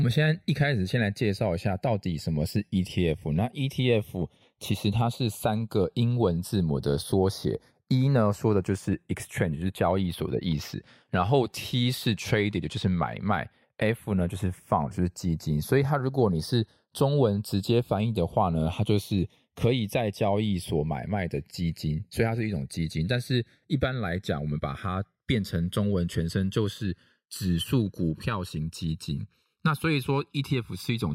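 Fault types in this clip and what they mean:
Channels drifting apart: the left and right sides of this speech sound like they come from two devices running on slightly different clocks, something on the order of 40 ppm apart, so the gap between them keeps sliding. By the end it's still under a millisecond, but fold it to mono and you get comb-filter notches gliding slowly through the spectrum, a slow flanging sweep that runs through the whole clip.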